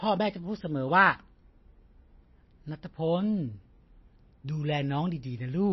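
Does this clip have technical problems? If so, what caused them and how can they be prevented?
Yes. Throughout, likely MP3 compression at a starved bitrate, around 24 kbps, removed everything above 5.8 kHz and left the speech swirly and dull. Encoding at a higher bitrate prevents this.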